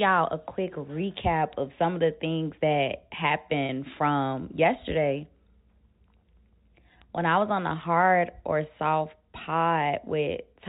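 At 3.66 s a single packet loss with pitch repetition occurs: about 30 ms of speech went missing, and the receiver filled the gap by repeating the last pitch period, so the sound briefly holds on a slightly buzzy tone until 3.69 s. This rides on G.711 telephone coding, which keeps the audio band-limited below 4 kHz.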